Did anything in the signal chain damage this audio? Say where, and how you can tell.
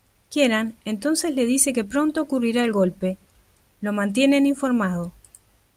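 No, nothing in the signal chain audibly damaged this speech. No stage of the chain leaves an audible mark on it.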